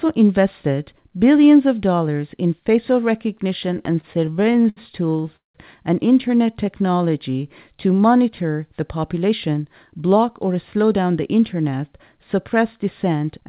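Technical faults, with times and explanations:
3.72 to 5.56 s, repeated stalls (stutter): The sound halts about 20 times, for 445 ms in total, with the longest hold at 182 ms. Packets arrived late, so the jitter buffer kept running dry. The receiver stretched the last sound to bridge each wait. Nothing is lost, but the audio drags and stutters.
6.47 to 7.10 s, jitter buffer slow-down: The audio runs at 90% speed with unchanged pitch, adding 73 ms. The buffer was low, so the receiver repeated single pitch periods to rebuild its reserve. Sounds come out drawn out.
9.18 to 10.94 s, jitter buffer speed-up: The audio runs at 108% speed with pitch intact, dropping about 150 ms. The buffer held too much audio, so the receiver cut out short pitch-period pieces repeatedly to reduce delay. The speech sounds hurried.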